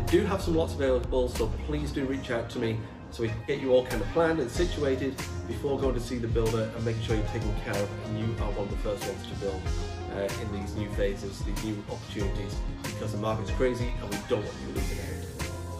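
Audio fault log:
No faults were found in this audio; the signal holds continuity without any audible interruption or distortion of the path.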